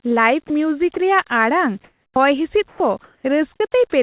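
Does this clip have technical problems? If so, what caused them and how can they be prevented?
Yes. Sound dropped by the voice detector occurs twice, at 0.48 to 0.50 s and 0.94 to 0.96 s, where 20 ms of speech gives way to flat noise. The likely cause is the sender's voice detector briefly treating quiet speech as background and stopping transmission, so the receiver substitutes comfort noise. Unlike a packet-loss gap, the hole fills with steady hiss rather than silence or a repeated fragment. Lowering the detector's threshold or adding hangover time prevents it.

Comfort noise in place of the background fills two pauses, 1.84 to 2.16 s and 2.68 to 3.24 s, replacing the real room sound with smooth, featureless noise. In the first pause the fill sits about 7 dB lower than the genuine background, which itself lies about 41 dB below the loud passages. This is likely the sender pausing transmission during non-speech. 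Unlike a noise gate, the pause never goes fully silent, and the texture changes rather than just the level. Disabling discontinuous transmission, or improving the noise-shape updates, prevents it.

Onset clipped by the voice detector appears at 2.14 to 2.16 s, where 20 ms is missing, and at 2.76 to 2.80 s, where 40 ms is missing. Speech starts abruptly after the comfort noise, without its soft beginning. The likely cause is a detector slow to register renewed sound. Unlike a full dropout, only the attack is lost and the rest of the sound arrives intact. A faster detector attack or a look-ahead buffer prevents it.

Sound chopped by the voice detector affects 3.56 to 3.74 s, where about 60 ms of speech in scattered pieces is replaced by fill. The likely cause is the detector toggling repeatedly around its threshold. Unlike a single dropout or a clipped onset, several short switches cluster in one stretch. 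Adding hysteresis to the detector prevents it. Throughout the clip, the call path's narrowband coding leaves nothing above 4 kHz, which fits G.711.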